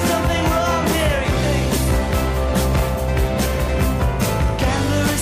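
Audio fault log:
No audible faults detected.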